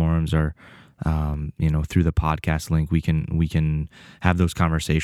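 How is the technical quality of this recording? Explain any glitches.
The speech carries a recurring glitch. From 1.34 to 3.86 s, clicks arrive every 1.26 s, likely clock drift buffer slips: mismatched clocks, a few hundred ppm apart, drop or repeat a small sample block.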